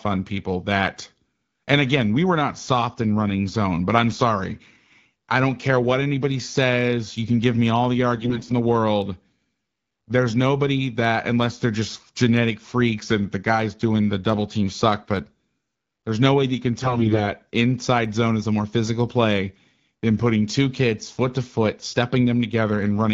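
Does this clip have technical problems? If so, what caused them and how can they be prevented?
Yes. AMR bit errors cause brief hoarse, gargly bursts from 8.16 to 8.52 s, after "give me all the" and before "the world", and from 16.81 to 17.23 s, after "way that you can" and before "inside zone is a". A weak link flipped around one bit in ten in the less protected bits of roughly 18 speech frames in each burst. The checksum still passed, so the decoder used the corrupted pulse, gain and spectrum values instead of rejecting the frames. Unlike packet loss, these faults keep pitch and level roughly intact, with no muting or repeated sound, and only the texture turns scratchy. Stronger channel coding or a better radio link would prevent it.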